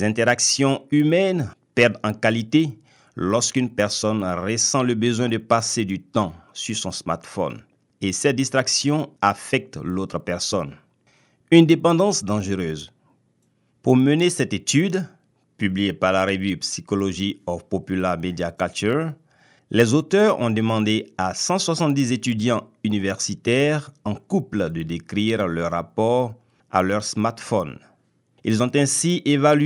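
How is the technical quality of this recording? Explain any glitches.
The recording carries one fault that runs through the whole clip.

The resampler restarted on every block: each 100 ms block was converted on its own, which fits an upsampling from 24 kHz to 48 kHz, so block edges lack their true neighbours. This leaves a faint tick ten times a second during speech. A spectrogram shows thin vertical lines every 0.1 s, and the waveform shows small steps at each boundary.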